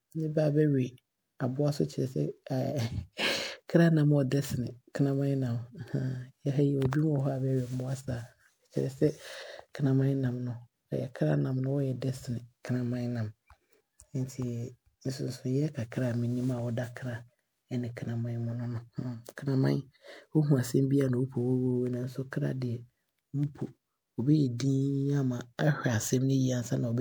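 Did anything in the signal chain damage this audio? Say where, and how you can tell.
Yes, and it's in the codec stage, across the whole speech clip. It has that swirly, hollow, smeared texture, with consonant attacks blurred, far worse than a single 128 kbit/s MP3 pass would leave, even though content reaches up to about 20.9 kHz. That points to generation loss, likely from around seven MP3 re-encodes. Each decode-and-encode pass requantises on a shifted frame grid, so the noise and spectral holes pile up rather than staying put.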